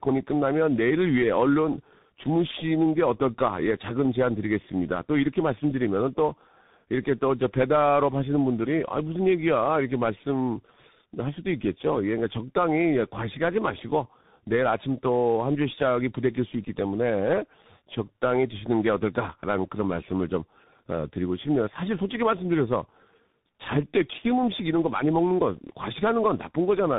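Tandem speech coding runs throughout: the speech passed through two speech coders in a row, likely a low-rate one then CVSD, leaving it rough, warbly and cut off above 3.8 kHz.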